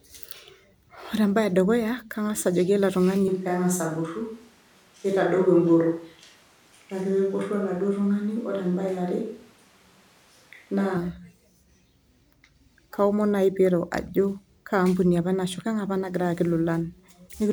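The close microphone's feed was likely lost or dropped from the mix at 3.28 s, leaving a switch to a distant microphone until 10.97 s. The speech turns abruptly roomy and hollow with thinner bass at about the same level, and background noise sits roughly 35 dB below it.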